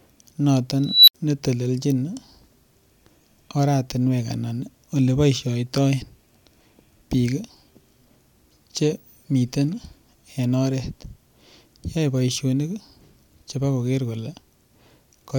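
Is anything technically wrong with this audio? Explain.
Yes. From 0.86 to 1.15 s a high squeal at around 4 kHz swells out of the speech over 219 ms, clips harshly, then drops into 69 ms of silence. This is an unstable filter. A recursive filter with bad coefficients kept feeding its own output back, growing without limit until the numbers overflowed and the sound cut out until the filter reset.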